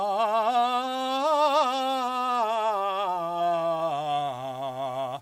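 Throughout the music, a grainy, signal-following grit roughens quiet passages, sitting roughly 35 dB below the music. The likely cause is low bit depth without dither, rounded to about 8 bits.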